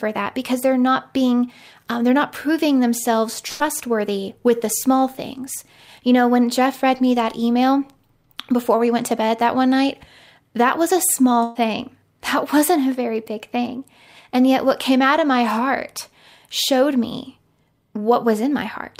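Speech, with two bursts of packet loss at 3.47–3.64 s after "they're not proving themselves" and 11.44–11.57 s after "night that was a", each concealed by about 120 ms of the last sound held and fading before resuming.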